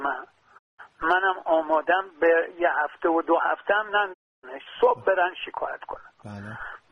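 The receiver lost lock on the digital stream, or received frames that failed their checks, and twice muted its output until clean frames arrived. This is a digital broadcast dropout. A fade of about 20 ms takes the audio to silence from 0.57 to 0.80 s and again from 4.12 to 4.45 s. The gaps last roughly 190 ms and 290 ms, which fits six and nine lost frames. Everything transmitted during those holes is gone, and the audio resumes further along.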